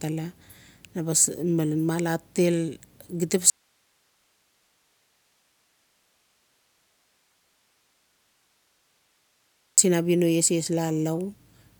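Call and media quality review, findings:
Audio dropout to a faint residue, 3.50–9.78 s: speech cuts out abruptly for about 6.3 s, leaving only hiss roughly 45 dB down. Likely a signal-path break with the downstream input still live.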